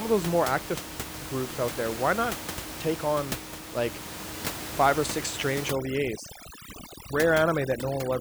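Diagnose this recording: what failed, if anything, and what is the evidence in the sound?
The call processing stage failed: overdone noise removal sets in at 5.69 s, right after "five or six strange", and lasts to 8.20 s. The room noise, about 10 dB below the speech before that point, collapses to near silence with twinkling specks. The suppressor gates whole frequency bands near its noise estimate and takes quiet speech detail with them.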